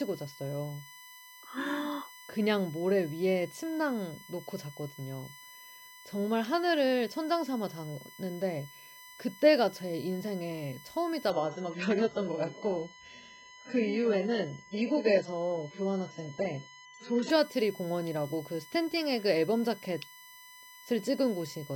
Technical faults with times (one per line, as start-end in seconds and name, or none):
0.00-21.75 USB whine
11.30-17.30 adaptive stream at a lower bitrate